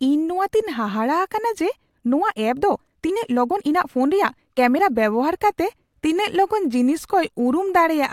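From 1.87 to 4.91 s, a time-stretched section plays at 1.41 times normal pace. Pitch stays put. It sounds rushed, likely from software dropping short pieces.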